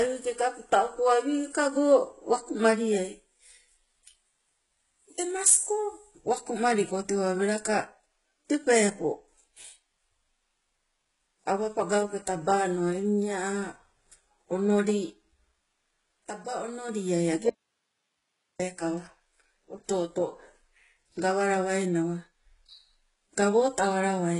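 A speech recording with heavy codec damage throughout: the treble sounds synthetic, with gritty, metallic s sounds and nothing above about 11.1 kHz. This is likely HE-AAC compression, where spectral band replication rebuilds the upper band from copied lower bands, consistent with a very low bitrate around 12 kbps. From 17.50 to 18.60 s the speech abruptly cuts out for about 1.1 s, leaving only hiss far below the speech level before returning mid-flow. This is likely an audio dropout to a faint residue, with the signal lost while the path after the break stayed live.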